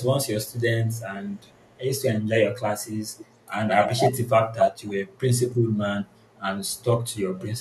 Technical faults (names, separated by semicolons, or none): echo leak